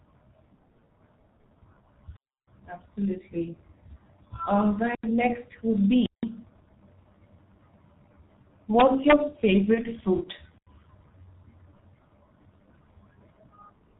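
G.723.1 codec damage runs through the whole speech recording: at about 6.3 kbit/s with 30 ms frames, nothing above 4 kHz survives and the slowly updated voice model leaves the speech heavily muffled and hoarse, with consonants smeared together. Blocks of digital silence appear at 2.16–2.48 s (a 312 ms hole), at 4.95–5.04 s (85 ms, just before "next would") and at 6.06–6.23 s (171 ms, just after "next would"). Each is a hard drop to silence and back, which points to output buffers of 4096 and 8192 samples not being filled in time. VoIP packet loss concealed by the speech codec appears at 9.74 s. One 30 ms frame went missing, and the decoder filled it by extending its last pitch and filter at falling gain, giving a brief buzzy tone or coloured noise that fades. The voice stays weakened or distorted until about 9.87 s while the decoder's state recovers.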